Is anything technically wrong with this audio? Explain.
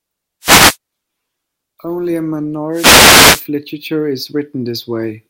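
Yes. A wireless microphone noise hit occurs twice, from 0.41 to 0.77 s and from 2.72 to 3.46 s. The analogue FM radio link from the microphone briefly lost signal strength as reflected paths cancelled the direct one, so the receiver's own noise rose over the voice. Each hit is a short swish or burst of static on top of the speech. The second is about twice as long as the first.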